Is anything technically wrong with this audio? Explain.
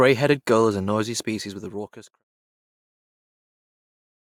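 No, nothing here is technically wrong with the speech.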